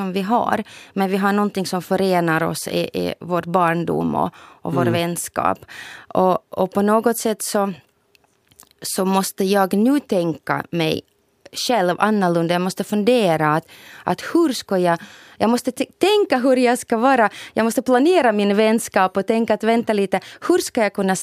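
No technical faults are audible.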